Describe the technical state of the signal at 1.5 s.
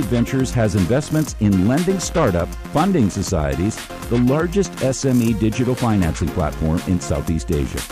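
Hard clipping is present at 1.5 s, in a span from 1.44 to 2.36 s. The signal runs about 2 dB past what the stage can pass. Its peaks are cut flat, adding high harmonics. With this slight overdrive, it shows as crackle on the peaks.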